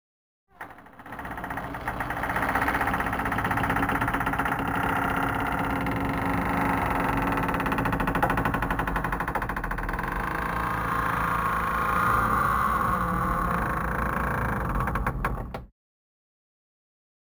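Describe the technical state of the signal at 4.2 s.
At 4.2 s the signal shows crude rate conversion, present for the whole clip rather than at that moment alone. The rate was raised without filtering by repeating nearest samples, which fits a 32 kHz to 44.1 kHz conversion. This leaves an inharmonic, gritty fizz roughly 25 dB below the signal that tracks loud and high-frequency content.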